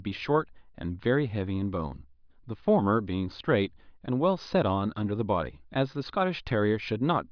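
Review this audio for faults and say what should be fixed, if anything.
Nothing stood out on listening, so there is nothing here that needs fixing.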